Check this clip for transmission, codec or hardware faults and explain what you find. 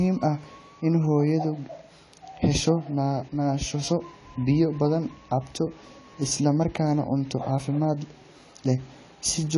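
One fault runs through the whole recording. AAC compression, present throughout: nothing remains above 11.4 kHz, and the speech sounds dull and smeared, with a fizzy, warbling texture on sibilants. This is likely low-bitrate AAC-LC coding. Its masking-driven quantisation lowered the cut-off and thinned the spectrum, which fits roughly 32 kbps.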